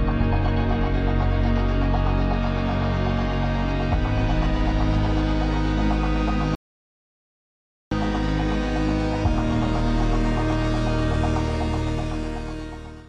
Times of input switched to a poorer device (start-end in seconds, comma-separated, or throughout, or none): none